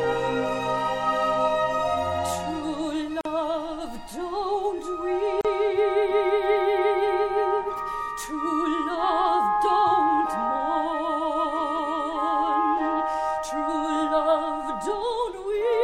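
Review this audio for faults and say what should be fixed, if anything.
A gap at a join of encoded pieces opens at 3.21 s (about 43 ms) and 5.41 s (about 36 ms). Each is encoder start delay and end padding left untrimmed, and the sound resumes exactly where it stopped rather than skipping ahead as a dropout would. Trimming each piece's encoder delay and padding before joining, or encoding the whole program in one pass, prevents it.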